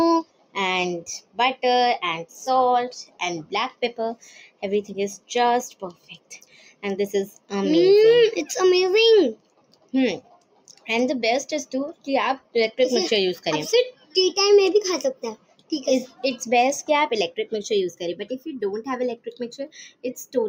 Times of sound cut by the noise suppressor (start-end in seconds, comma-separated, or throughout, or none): 0.24-7.52, 9.35-10.88, 11.93-12.55, 13.92-14.15, 15.14-16.24, 19.17-20.35